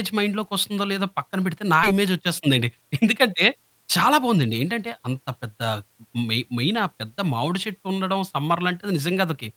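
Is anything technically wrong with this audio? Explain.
Yes, there are two faults close together in this speech clip.

The first is a skip ahead at 1.83 to 1.85 s. Roughly 0.7 s of speech is simply gone. It was dropped in transit or discarded by an overflowing jitter buffer while later audio was already queued, so playback jumps straight to the later material with no gap filled in. Unlike a dropout, there is no silence or concealment noise. The speech lurches forward, and the two sides are butted together almost directly.

The second is a jitter buffer speed-up from 1.93 to 4.44 s. The buffer was holding more audio than its target, so the receiver repeatedly trimmed out short pitch-period-sized slices, about a fifth of a second in total. Over those 2.5 s the speech runs at 108% speed and sounds hurried. The pitch stays put, which distinguishes it from a resampling or clock error, where faster playback would also raise the pitch.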